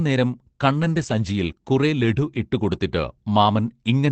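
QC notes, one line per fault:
0.77–1.11 s, lost packet rebuilt from error correction: just before "സഞ്ചിയിൽ കുറെ ലഡു ഇട്ടുകൊടുത്തിട്ട്", about 180 ms of speech turns rougher and noisier but never drops out. The decoder played low-bitrate copies carried in the following packets, so this never becomes the gap or smeared tail of plain concealment.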